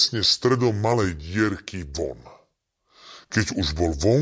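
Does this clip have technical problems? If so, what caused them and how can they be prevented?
Yes. The speech has a wrong sample rate throughout: it runs at about 0.73 times its proper speed and sits about 5.5 semitones low, which fits audio captured at 22 kHz being played back at 16 kHz with no conversion. Prevent it by resampling explicitly or tagging the file's true rate correctly.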